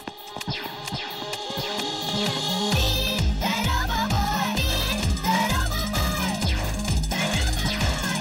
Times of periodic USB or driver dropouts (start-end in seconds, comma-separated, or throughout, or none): none